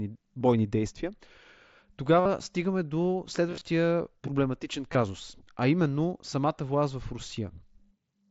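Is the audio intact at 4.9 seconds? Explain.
No. At 4.93 s there is a buzzy smear with a slight warble as the sound resumes. This is concealed Bluetooth headset packet loss: about 15 ms of headset audio, consistent with a couple of lost frames, was filled by repeating the closest-matching recent stretch of waveform.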